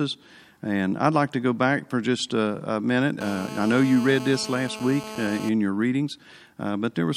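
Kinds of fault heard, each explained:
GSM phone buzz: the audio circuit rectified the 217-per-second radio bursts of a 2G phone on a call, adding a steady, raspy 217 Hz buzz.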